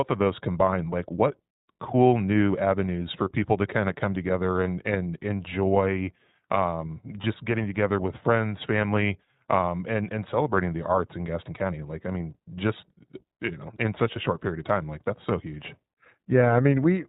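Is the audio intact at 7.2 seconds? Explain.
No. Between 7.22 and 7.25 s, lost iLBC frames left about 20 ms missing, which fits a single dropped 20 ms frame. The decoder filled the gap by repeating the last pitch cycle mixed with noise, so it sounds like a brief held, slightly buzzy vowel, with the voice returning almost at once. The iLBC codec also runs through this moment, coding each 20 ms frame independently at 15.2 kbps and cutting everything above 4 kHz, which leaves the speech narrowband, a little rough and synthetic.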